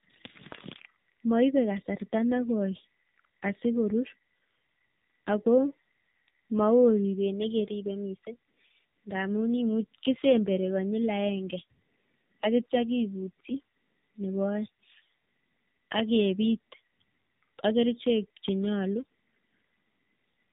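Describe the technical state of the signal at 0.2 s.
At 0.2 s the speech already carries tandem speech coding, which runs through the whole clip. It sounds twice through a narrowband coder like AMR-NB, each pass re-coding the last one's errors, leaving rough, muffled, warbly speech with nothing above 3.8 kHz.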